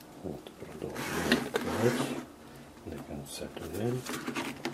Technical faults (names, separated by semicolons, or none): none